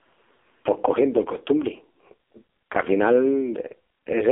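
Speech recorded through an AMR narrowband mobile codec for its whole length, heavily damaged: the band runs about 300 Hz to 3.5 kHz with nothing above 3.7 kHz, and the buzzy, synthetic texture points to a low AMR-NB mode near 5 kbps.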